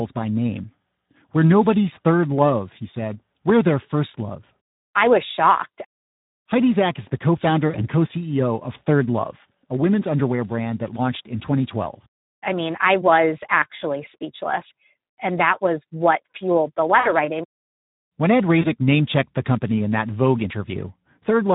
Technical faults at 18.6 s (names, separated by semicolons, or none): Speex codec; VoIP packet loss concealed by the speech codec